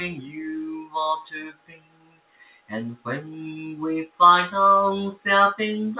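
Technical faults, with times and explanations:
Throughout: noise suppressor applied to music or sounds. A speech-tuned suppressor was left running, so it keeps treating sustained tones and ambience as noise. The level swings by roughly 20 dB, giving a pumping, fluttery, thinned-out feel as held parts sink and attacks poke through.
0.79–0.95 s and 1.28–2.71 s: sound cut by the noise suppressor. In both stretches the suppressor decided the steady material was noise and clamped it hard, by about 16 dB in the first and about 19 dB in the second, longer dip. Tails collapse early while transients survive. The band-limit to 4 kHz from the call path, which points to G.711 at 64 kbps, makes it sound duller still.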